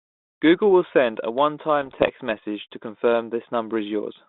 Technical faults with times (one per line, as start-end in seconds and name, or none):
1.82-2.10 bit errors on an ADPCM link